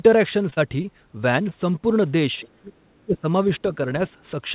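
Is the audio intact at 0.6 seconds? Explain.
No. The stretch from 0.50 to 0.61 s is short concealed packet loss, with a second gap nested inside it at 0.54 to 0.59 s. About 20 ms of audio arrived too late each time. The decoder covered the holes by extending the preceding sound for 17 ms and 29 ms and dropped 7 ms of real audio while rejoining. The result is a quick smeared wobble.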